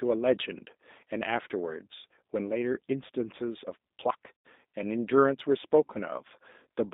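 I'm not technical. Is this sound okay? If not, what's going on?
No. The whole recording has gone through the G.729 codec, a phone-call speech squeezer. It cuts everything below 200 Hz and above 3.7 kHz, so the speech sounds thin, slightly rough and synthetic. Unlike a simple muffled recording, it has a plainly audible artificial, rebuilt texture.

From 4.38 to 4.46 s comes VoIP packet loss concealed by the speech codec. A piece of the call went missing, which fits about three lost packets. The decoder guessed from the preceding sound, so you hear a brief stretched, fading smear rather than silence. That is what separates it from a plain dropout.

Between 5.40 and 5.84 s there are four CD scratch ticks. Each is a tiny click, a fraction of a millisecond long, repeating at a steady rhythm. That regular spacing, from one blemish passing on each turn of the disc, separates them from random crackle.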